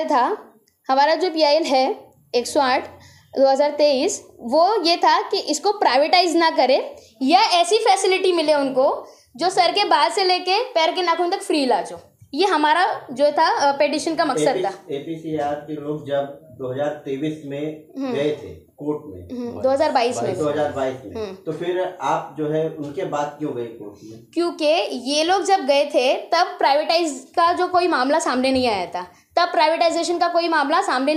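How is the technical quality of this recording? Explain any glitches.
The recording has one audible glitch, sample clock jitter, between 25.48 and 27.30 s. The converter's timing wandered by roughly a microsecond or two, so samples landed early or late. Steep, loud passages suffer most, leaving a hiss-like roughness about 40 dB below the sound.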